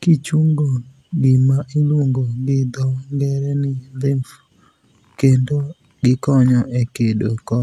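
No technical faults are audible.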